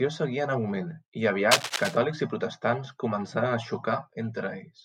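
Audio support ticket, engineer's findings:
Cable scratch noise, 1.51–1.97 s: rough scratchy burst about as loud as the speech. Likely a worn cable or connector flexing, contact resistance jumping around.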